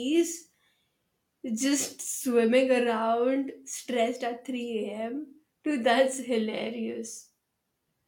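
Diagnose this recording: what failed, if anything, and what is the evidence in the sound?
Nothing failed, and there is no evidence in the sound of a fault at any stage of this recording.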